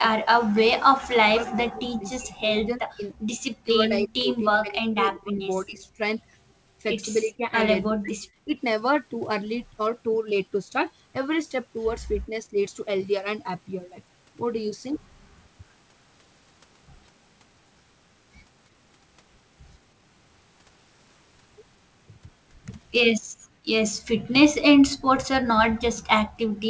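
From 0.00 to 5.99 s, and again at 7.36–8.58, 12.26–12.55, 24.27–24.82 and 25.51–25.95 s, the speech dips and breaks into pieces, likely speech suppressed in double talk: the echo canceller, unable to separate the talker from the loudspeaker echo while both sides spoke, turned everything down. The waveform shows the envelope collapsing in chunks, by roughly 40 dB at worst and only about 10 dB at 12.3 s. On a spectrogram the energy thins or vanishes in vertical bands.

Near 5.8 s a faint delayed copy of the voice slips through for a split second, about 35 dB below the speech and trailing it by 320 ms. This is likely an echo leak, where the loudspeaker side's echo canceller failed to remove all of the loudspeaker sound its microphone picked up. It shows as a weak ghost of earlier harmonics.

At 23.28–23.69 s and 26.48–26.60 s the room sound drops away abruptly, by about 39–40 dB. This is background gated by the echo canceller, which clamped the microphone while the loudspeaker played. 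The noise floor appears as a sudden dark gap on the spectrogram and a flat line on the waveform.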